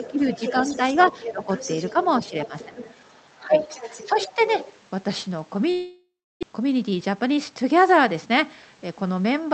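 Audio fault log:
0.0–0.2, 0.77–1.48, 1.93–2.77, 3.4–3.54 and 4.06–4.58 s: speech suppressed in double talk. The speech dips by about 5 to 10 dB in short stretches. Two sides likely talked at once, and the echo canceller turned everything down rather than separating them.
0.04–4.79 s: other side's voice leaking through. A second voice sits faintly under the speech, about 15 dB lower. It is likely loudspeaker echo that the canceller failed to remove fully from the microphone.
5.71–6.45 s: long network dropout. About 0.7 s is filled in. The last sound carries on as a fading buzz, then roughly 0.3 s of silence follows. Audio likely stopped arriving, and about 0.6 s of speech never returns.
6.53–7.38 s: jitter buffer speed-up. Speech runs at 109% speed with unchanged pitch and sounds hurried. The receiver cut short pitch-period pieces, about a tenth of a second in all, to clear the backlog after the gap.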